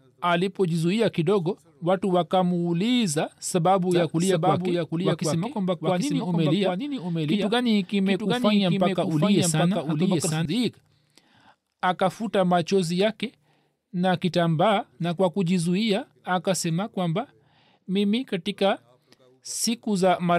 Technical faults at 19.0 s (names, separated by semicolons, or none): none